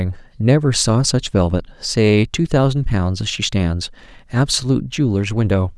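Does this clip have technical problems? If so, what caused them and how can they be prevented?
No, nothing technical stands out in this bit of speech, so there's nothing here that needs fixing or preventing.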